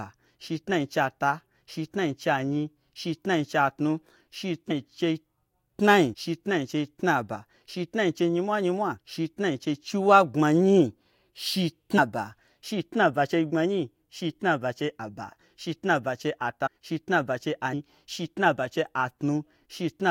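Skips at 4.70, 6.13, 8.98, 11.97, 16.66 and 17.72 s mark where the speech jumps ahead by roughly a tenth to a fifth of a second. These are compressed frames skipped: whole frames went unplayed, so the audio jumps ahead by their length.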